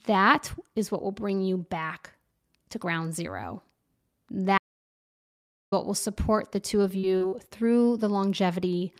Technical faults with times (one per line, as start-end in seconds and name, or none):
4.58-5.72 audio dropout to silence
6.81-7.34 repeated packet loss (robotic sound)